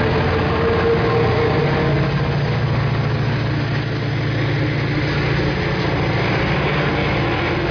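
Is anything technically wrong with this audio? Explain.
No, there are no technical faults to report here.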